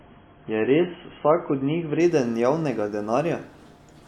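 An adaptive stream starting at a low bitrate covers the first 2.0 s: the player opened on a low-quality rendition to start quickly, which fits roughly 16 kbit/s AAC, leaving the speech dull with nothing above 3.4 kHz before it jumps, without a gap, to 96 kbit/s AAC.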